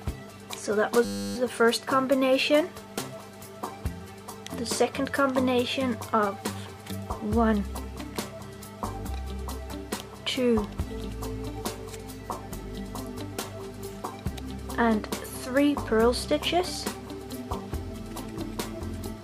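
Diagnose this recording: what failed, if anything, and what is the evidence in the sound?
A system hang loop failed at the driver or buffer stage. From 1.05 s to 1.36 s the sound is replaced by a steady buzz at 100 Hz. The host or driver froze, and the sound hardware kept replaying the same 10 ms stretch of its ring buffer, about 31 times. A loop that short fuses into a tone rather than a stutter. Little or no audio seems lost, and normal sound resumes at 1.36 s.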